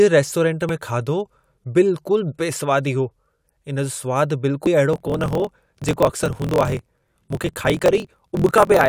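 At 0.69 s, and again at 4.66 s, the speech is broken by a short chirp, the sign of damaged data in a compressed stream. Corrupted bytes leave the decoder unable to read those frames, so it loses sync and skips forward to the next valid frame header. The result is a squawk. A spectrogram shows a thin vertical smear of broadband energy at each point, and the waveform shows a small discontinuity there.

From 4.91 s to the end, a block size mismatch (truncated) takes over. One stage hands on longer blocks than the next reads, which fits a 1024-sample read, and the tail of every block is discarded. A buzz at 43.1 Hz rides on the speech, which runs 1.12 times fast at roughly its normal pitch. A spectrogram shows evenly spaced vertical seams about 23 ms apart, and the waveform shows a regular step at each block join.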